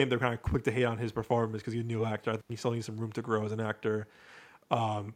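A speech recording with an intermittent contact fault between 2.40 and 2.50 s. The signal drops out for about 81 ms, with crackle at the onset and recovery and faint hiss during the gap, the pattern of a loose cable or plug momentarily opening the signal path and then reconnecting. The room's background noise, about 42 dB below the speech, sits underneath and is part of the acoustic capture rather than a fault.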